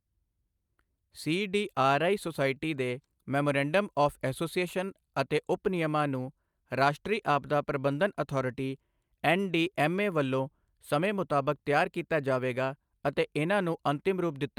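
A speech recording with no technical faults to point to. Nothing in it marks a problem at any moment.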